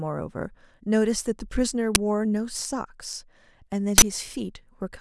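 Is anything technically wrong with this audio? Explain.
Yes. This speech clip has two uninitialised buffer faults, at 1.95 s and from 3.98 to 4.02 s. Each time, a block was played before audio was written into it, so stale memory contents came out as samples: a 10 ms loud crack and then a 40 ms burst of digital noise. Unlike a dropout, which leaves silence, or a click, which is a single spike, these are blocks of harsh noise unrelated to the speech around them.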